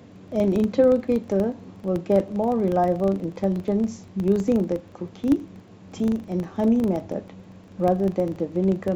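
From start to end, the speech carries a filter restarted on every block. The filter loses its memory at each block boundary and starts again from silence. Each restart leaves a small click. These repeat at 25 Hz, every 40 ms, forming a low buzz that rises and falls with the speech level.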